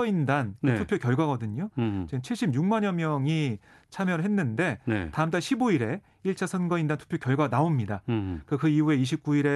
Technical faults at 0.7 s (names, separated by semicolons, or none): none